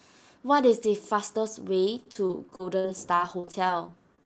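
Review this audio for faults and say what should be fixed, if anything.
Repeated packet loss (robotic sound) runs from 2.03 s to the end at 4.26 s: fifteen gaps, the longest 48 ms, each filled by extending the last sound, so the speech turns choppy with pieces missing. A spectrogram shows short frozen, smeared blocks, and the waveform repeats near-identical cycles. Steadier network delivery and a larger jitter buffer would prevent it.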